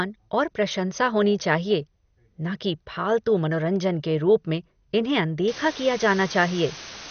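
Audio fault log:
throughout: MP2 compression. The speech is dull, with nothing above 6.5 kHz, and it gurgles. This is likely MP2 coding at around 48 kbps, starving upper sub-bands.
5.48–7.10 s: low bit depth with dither. A steady, even hiss sits about 10 dB below the speech. Dithered rounding to very few bits, perhaps 5, turns error into noise.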